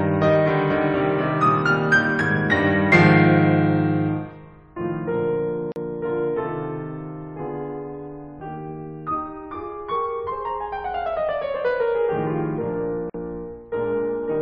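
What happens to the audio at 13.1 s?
At 13.10 s the music drops into a brief silence, a gap at a join of encoded pieces, lasting about 48 ms until 13.14 s. The edges are smeared by the codec, and the music resumes exactly where it left off. This happens when segments are encoded separately and butted together untrimmed: the encoder's start-up delay and the padded final frame both remain, leaving dead air at the seam.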